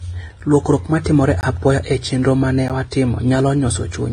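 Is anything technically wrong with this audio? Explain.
Yes, there are two problems. Transcoding between lossy codecs runs through the whole clip: the speech was likely encoded with one low-rate codec and then re-encoded with another. The second pass spends bits on the first one's artefacts and adds its own, so both kinds are heard together, and nothing remains above 9.7 kHz.

Blocks of digital silence occur at 0.40 s, 1.41 s and 2.68 s, where the sound cuts out abruptly and returns without a fade. The first lasts 5.3 ms, which fits a 256-sample buffer that wasn't filled in time, and it sounds like a tick. The second is nearly 20 ms, between "ma timore" and "apoya e chenro ma", and it is heard as a brief hole. The third, about 14 ms, gives a tick or dip.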